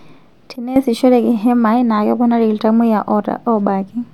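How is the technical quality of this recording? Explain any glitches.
The recording has one clear glitch, a sudden gain jump, from 0.56 to 0.76 s. The speech and its background noise both drop by about 12 dB at once, then return, likely from a gain setting applied without a ramp. The waveform shows a step-shaped dip, and the spectrogram shows a uniformly darker band.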